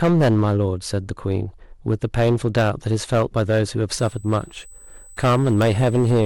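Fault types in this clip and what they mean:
Hard clipping: A harsh, crackling fuzz rides on the louder parts of the speech throughout, because the signal was driven about 10 dB beyond what one stage could pass, so a small share of peaks are sheared flat, spraying harmonics high into the spectrum.
USB whine: A thin, steady tone at 8 kHz appears from 3.92 s to the end, sitting roughly 30 dB below the speech, the signature of current drawn in 125-microsecond USB microframes leaking into the audio through shared power or ground.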